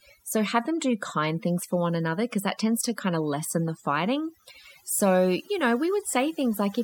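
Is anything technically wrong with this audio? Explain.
Yes. Throughout the speech there is overdone noise removal. A noise reducer set far too aggressively pulls individual frequency bands down or out whenever they sit near its noise estimate, and the softer parts of the voice are removed along with the noise. The background collapses to near silence dotted with twinkling specks. Unlike a noise gate, which mutes everything at once, this works band by band, leaving those scattered tonal specks.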